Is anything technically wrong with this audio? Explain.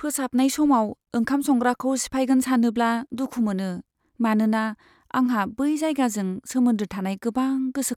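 No, nothing is technically wrong.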